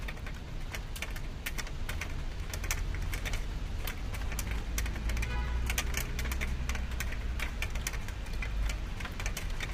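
From start to end, the sound carries heavy low-delay AAC compression damage. It is rough and grainy throughout. Noise fills the gaps where clean tonal detail should sit. Nothing is present above 15.6 kHz, so the top band is dull. The likely cause is an AAC-ELD encoder of the kind used in video calls. Its short frames resolve fine frequency detail poorly. The degree of damage points to a low bitrate, around 24 kbps.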